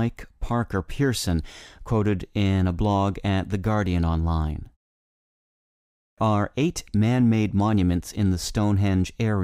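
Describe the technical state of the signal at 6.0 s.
At 6.0 s the output device has dropped into a low-power state during the preceding 1.24 s of silence and has not yet woken and relocked, producing a clipped start after a pause from 5.92 to 6.18 s. About 256 ms of incoming speech is swallowed before playback resumes, so the phrase "are eight man made" bursts abruptly out of silence with its opening sounds missing, rather than rising naturally from the quiet before it.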